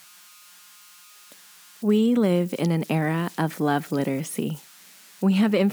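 A faint whistle near 1.5 kHz runs throughout, about 28 dB below the speech. These are converter idle tones from an undithered delta-sigma converter looping bit patterns.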